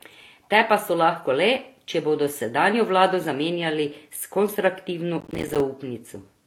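Throughout, the speech carries two kinds of coding artefacts at once, a watery smearing under a brittle synthetic top. This is likely transcoding between lossy codecs, ending in HE-AAC, rather than one codec's single signature.

From 5.21 to 5.61 s, just after "vlado zamenjali s konstruktivno", processor overload crackle tears through: dozens of missed buffers of a few milliseconds each leave silent holes, heard as dense grit rather than one clean dropout.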